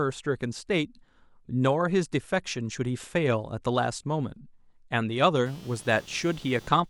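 A ground shared between the computer and the audio circuit shifts with the machine's changing load, causing computer activity noise from 5.46 s to the end. A buzzy chirp pulsing roughly 200 times a second sits faintly under the speech, about 25 dB down.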